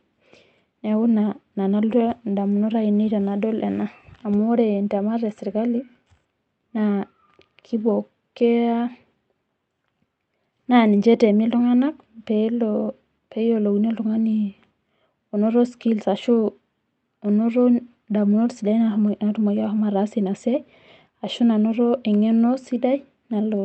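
No technical faults can be heard in the speech; it has passed through a call codec and jitter buffer, and the top end stops at around 8 kHz, as that kind of path would produce.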